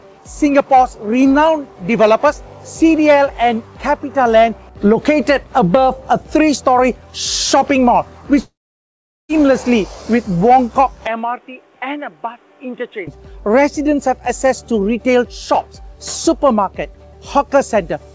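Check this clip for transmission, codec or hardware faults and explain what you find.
Two faults stand out: a long network dropout and a stretch that sounds like the input switched to a poorer device, both heard through a G.722 call path whose band stops at 8 kHz.

Long network dropout, 8.42 to 9.31 s: the sound stops for about 0.9 s, most likely because packets stopped arriving. The receiver briefly extends the last sound as a fading buzz, then leaves roughly 0.77 s of silence before audio resumes with that portion gone. On a waveform this appears as a short tapering tail followed by a flat line. On a spectrogram it is a smeared, decaying smudge and then an empty column.

Input switched to a poorer device, 11.07 to 13.07 s: with no gap at the changeover, the sound abruptly turns dull and boxy, drops about 10 dB in level, and gains a new background noise roughly 30 dB below the signal. The likely cause is the system swapping to a narrower-band microphone or headset profile. 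On a spectrogram, energy above 3.8 kHz vanishes for those two seconds, leaving a hard ceiling well below the 8 kHz limit elsewhere. The waveform visibly shrinks throughout this span.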